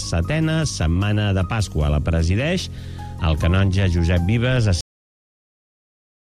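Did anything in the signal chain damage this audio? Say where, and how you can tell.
Yes. This is a cut-off end at the storage or buffer stage: the sound stops mid-event at 4.81 s and stays digitally silent. The final buffers were never written, so there is no decay. The waveform drops straight to a flat line, and the spectrogram shows a hard vertical edge followed by blank space.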